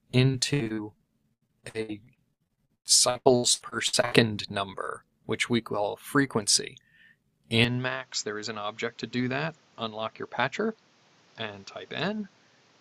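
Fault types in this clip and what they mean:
Repeated packet loss (robotic sound): Between 0.31 and 4.16 s, audio packets kept going missing or arriving too late. Each gap was filled by stretching out the sound just before it. The sound breaks into something like thirty short holes, the longest about 98 ms, with roughly 1.2 s lost in all. About a third of that stretch is patched-over sound, so it comes across as choppy and robotic.
Input switched to a poorer device: At 7.64 s the sound changes abruptly, with no silence at the join, and stays that way to the end. This is likely the recording switching over to a lower-quality input device. From that point nothing comes through above 7.6 kHz, so the sound turns duller and boxier. It also drops by around 5 dB, and a new noise floor appears roughly 30 dB below it.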